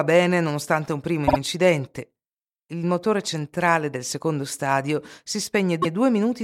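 At 1.27 to 1.37 s, just after "bene nonostante un primo", repeated frames cause a stutter. The decoder replays a 52 ms block of compressed speech two extra times, which stretches the audio by about 105 ms. At 5.81 to 5.94 s a 131 ms block plays once more.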